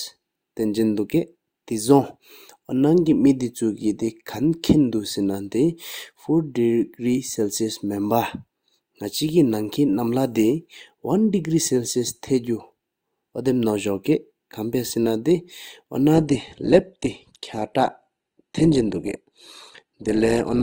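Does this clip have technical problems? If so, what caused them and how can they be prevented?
Yes. An adaptive stream at a lower bitrate takes over at 16.14 s and lasts to the end of the clip at 20.62 s. The speech suddenly loses clarity with no gap, and nothing remains above 12.2 kHz. Codec artefacts become more prominent, which fits a player switching from about 64 kbit/s to about 16 kbit/s Opus after the connection slowed. To prevent it, buffer more audio ahead or cap how low the player may adapt.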